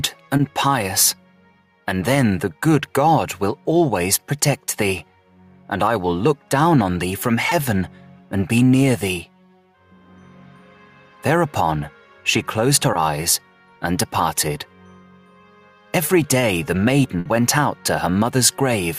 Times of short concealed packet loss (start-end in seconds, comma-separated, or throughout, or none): 0.37-0.41, 7.49-7.53, 12.93-12.97